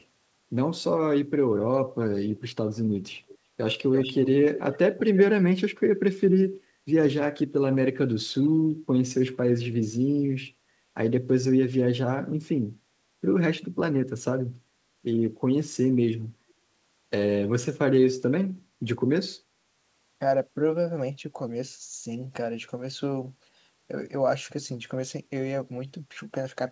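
From 3.28 to 3.38 s a faint copy of the speech trails it by 345 ms, then stronger scraps return at 3.93–4.3 s and 4.54–4.78 s. This echo leak likely escaped an echo canceller; a spectrogram shows the harmonic patterns repeated 345 ms later.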